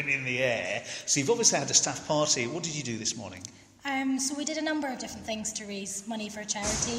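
At 1.01 s there's a bit error spike, a single flipped bit that throws one sample to about -28 dBFS and back, heard as a sharp broadband tick. Another lands at 3.37 s, spanning what sounds like a few consecutive samples, same sharp tick, unrelated to the audio.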